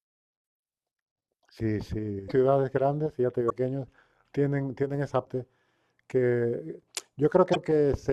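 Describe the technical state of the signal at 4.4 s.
At 4.4 s the speech signal is intact, with no dropout, clipping, glitch or other technical fault at that moment.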